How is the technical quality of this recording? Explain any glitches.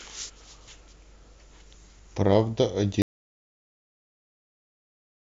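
An audio dropout to silence begins at 3.02 s and runs to the end of the speech. The input was likely lost, through a disconnection, link failure or mute, while the recorder kept writing silence, so the speech cuts off abruptly into total silence with no room tone.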